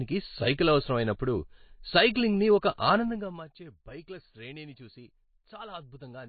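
Throughout the speech, nothing is present above 4.5 kHz, and coding artefacts are plainly audible. This is likely MP3 compression at a low bitrate, fitting about 24 kbps: starved of bits, the encoder drops weak frequency lines frame by frame and cuts the treble.

From 2.96 to 3.48 s, just before "బైక్ల శ్రేణిని చూసి", zipper noise appears. The level falls by roughly 20 dB in unsmoothed 1 dB steps, around thirty per second. Each step adds a small click, producing a ticking texture over the sound during the fade.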